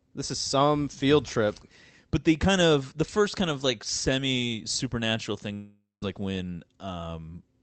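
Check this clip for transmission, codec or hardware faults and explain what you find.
One transmission fault stands out, heard through a call path whose top end stops around 8 kHz, consistent with Opus at roughly 32 kbps. From 5.53 to 6.04 s, right after "of like semi supernatural", there is a long network dropout, likely caused by about 0.48 s of audio never arriving. The receiver extends the last sound as a fading buzz or hiss, then about 0.17 s of near-silence follows before audio resumes at "like when". Unlike a brief packet-loss glitch, the fill outlasts its own decay and settles into silence.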